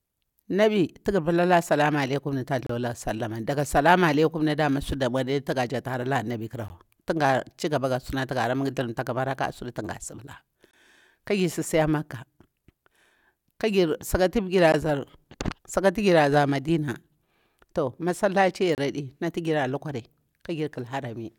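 Speech breaks off in short, hard-edged holes at regular intervals. This is a gap between stream segments. The first runs from 2.67 to 2.70 s and lasts 29 ms. Others follow at 6.68 s for 17 ms, 10.71 to 10.73 s for 21 ms, 14.72 s for 17 ms, and 18.75 to 18.78 s for 30 ms. They fall about every 4 s, once per segment. The timestamps of adjacent segments don't meet, so the player fills the space with silence. Nothing is lost. Time is only added.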